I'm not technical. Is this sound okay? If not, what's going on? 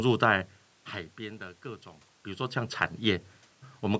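Yes, nothing stood out as a problem when listening to this speech clip.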